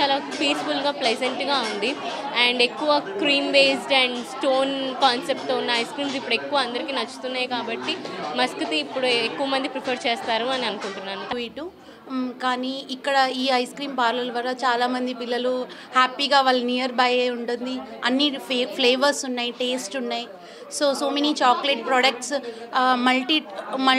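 There are no technical faults to describe at any point in the clip.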